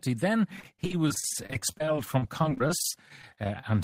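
Repeated packet loss from 0.56 to 3.64 s: dozens of gaps up to 32 ms are patched by extending prior sound, leaving the speech choppy and robotic.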